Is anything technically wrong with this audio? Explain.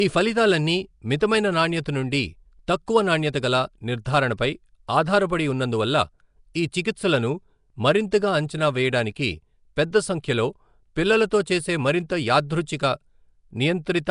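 Yes. Nellymoser compression runs throughout the speech: a rough, hissy halo and smeared, underwater quality, with nothing above 10.6 kHz. The likely cause is Flash's Nellymoser Asao codec at a rate near 44 kbps, coding short blocks with few bits and filling starved bands with noise.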